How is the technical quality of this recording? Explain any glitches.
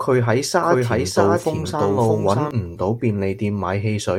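The recording has one clear glitch. From 0.63 to 2.51 s, a doubled audio track appears: the speech is repeated about 0.7 s behind, at roughly equal loudness. This is likely a second capture path mixed in late. Unlike echo, the copy has no decay or room colour and starts and stops abruptly.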